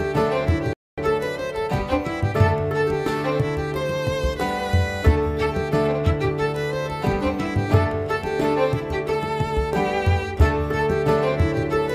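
At 0.73 s the sound cuts out mid-flow for about 0.24 s, a playback stall, likely from the player running short of data or a blocked thread. It resumes at 0.98 s. The waveform shows a flat gap; the spectrogram, an empty vertical band.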